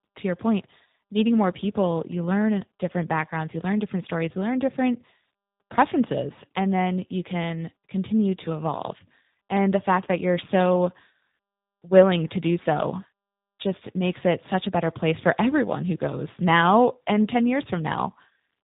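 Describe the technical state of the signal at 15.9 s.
Rough, muffled and warbly, with nothing above about 3.8 kHz. Tandem speech coding runs through the whole clip, including 15.9 s: CVSD, then G.711 mu-law, then G.729A at 8 kbit/s, each coder re-encoding the previous one's degraded output.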